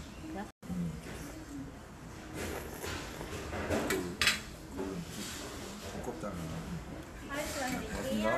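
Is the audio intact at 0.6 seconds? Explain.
No. A digital broadcast dropout runs from 0.51 to 0.63 s: the receiver stopped getting valid frames and muted until good ones returned, so the sound drops into silence for about 120 ms, which fits roughly five lost frames, and that stretch of audio is gone.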